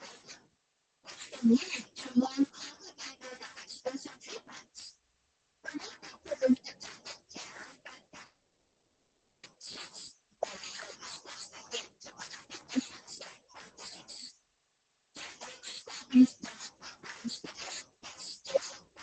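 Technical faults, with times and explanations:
8.25–9.45 s, long network dropout: about 1.2 s of the speech is gone and never returns. The last sound before the gap is stretched into a buzzy continuation that fades out, and the final half second or so is plain silence before the speech resumes, skipping everything in between. This pattern is likely caused by packets failing to arrive while the receiver concealed the loss, audible over the call codec's 8 kHz band limit.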